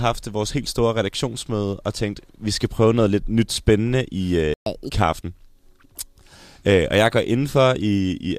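It's a speech recording, and at 4.54 s the sound just cuts out for about 125 ms, until 4.66 s. That's a playback stall, most likely the player running dry of buffered data or having its thread held up, so output goes silent mid-flow. Right after, from 4.66 to 4.91 s, you get catch-up at higher speed. The player races through the backlog at 1.5 times normal speed by resampling, so the speech briefly sounds rushed and chipmunky, up about seven semitones, before snapping back to normal pace and pitch.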